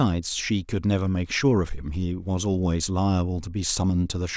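There are no technical faults to describe at any point in this speech recording.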